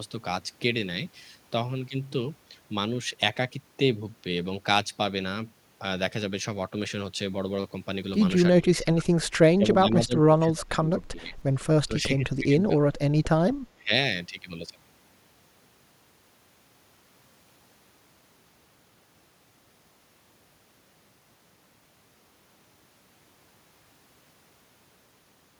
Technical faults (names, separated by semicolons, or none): speech suppressed in double talk